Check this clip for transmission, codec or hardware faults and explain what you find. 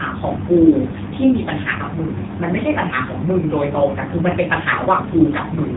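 One codec fault runs through the whole clip: the AMR narrowband mobile codec. Nothing above 3.8 kHz survives, and the speech comes through buzzy and synthetic, with heavy damage that points to a low AMR-NB mode around 6.7 kbps. The codec rebuilds each 20 ms frame from a vocal-tract model fed by a few pulses, so few bits leave a coarse, robotic texture. A plain band-limit would sound muffled but natural; this buzz marks a parametric codec.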